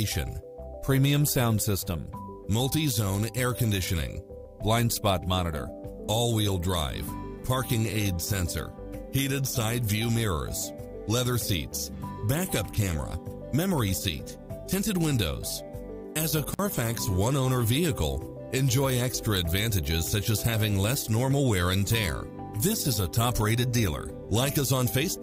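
At 16.53 to 16.59 s the sound drops out abruptly for about 52 ms, with a crackle at each edge and only faint hiss in the gap. This is an intermittent contact: a loose cable or plug briefly lost connection, then reseated.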